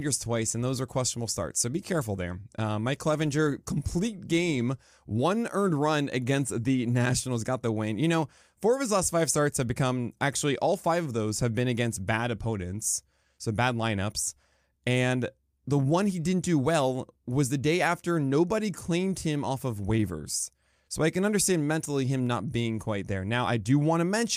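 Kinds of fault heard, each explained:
Nothing stood out on listening to this speech recording.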